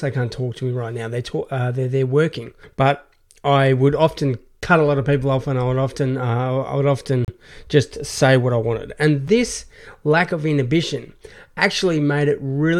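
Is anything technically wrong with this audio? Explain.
Yes, there are two gaps between stream segments in this speech. At 7.25 to 7.28 s, between "often uh I would" and "just say what I", a hard-edged silence of about 33 ms cuts in. A second, shorter hole of about 4.4 ms falls at 9.28 s, just before "this lack of inhibition". The timestamps of adjacent segments don't line up, leaving a small gap that the player fills with silence. No audio is lost, only delayed. The spacing fits 2-second segments.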